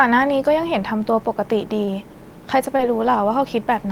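Short concealed packet loss at 1.85 to 1.89 s and 2.77 to 2.81 s: about 20 ms of speech arrived too late, and the receiver extrapolated across each gap, leaving brief smears.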